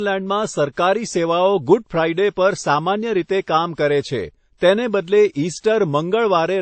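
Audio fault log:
Throughout, transcoding between lossy codecs: the speech stops at 8.3 kHz and carries layered codec artefacts, likely from an MP3 near 32 kbit/s re-encoded as WMA near 64 kbit/s.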